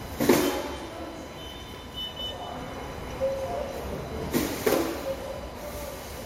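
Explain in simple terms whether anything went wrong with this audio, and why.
Something went wrong in the recording equipment: the computer's own electrical activity leaked into the audio. This is called computer activity noise. As the processor, graphics card or mouse changed their workload, they disturbed the electrical ground shared with the audio circuit. From the start to the end of the clip, that shows up as a thin, high buzz pulsing roughly a thousand times a second beneath the recorded sounds. It is quieter than those sounds.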